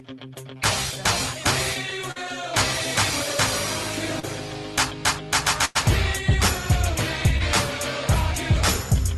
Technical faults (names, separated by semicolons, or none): short concealed packet loss; burst of packet loss